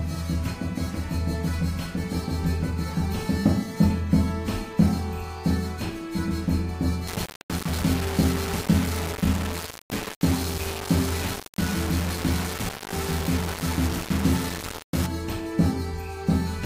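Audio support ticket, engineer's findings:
Grainy, gritty distortion tracking the signal, 7.07 to 15.06 s, noise roughly 10 dB under the sound. Likely low bit depth without dither: rounded to 4 bits, so the error follows the signal and quiet detail collapses into coarse steps.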